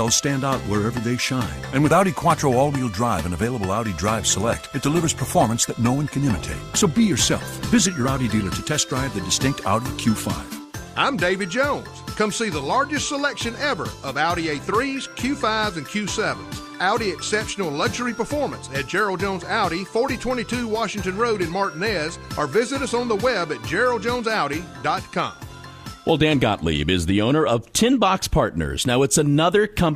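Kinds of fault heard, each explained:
Adaptive stream at a lower bitrate: from 4.43 to 8.43 s codec artefacts rise, then quality returns abruptly, which fits a step down from 64 to 24 kbit/s Opus. Unlike a dropout, there is no gap; unlike a poor encode, it is temporary.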